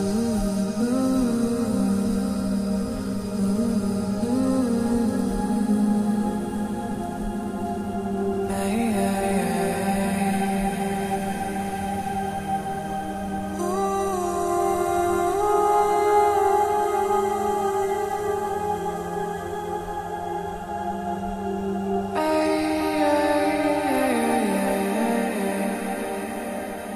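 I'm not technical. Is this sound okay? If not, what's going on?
Yes, nothing in this audio calls for attention.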